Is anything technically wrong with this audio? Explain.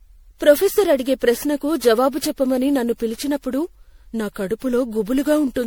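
Yes, the speech carries generation loss throughout. It sounds swirly, smeared and hollow, with consonant attacks blurred, more than a single encode near 96 kbit/s would explain. This likely comes from MP3 coding repeated around ten times, each pass quantising again on a shifted frame grid so that noise and dropouts accumulate. On a spectrogram, the energy breaks into flickering holes and speckled patches, though some content extends to about 20.6 kHz. On the waveform, transients look softened.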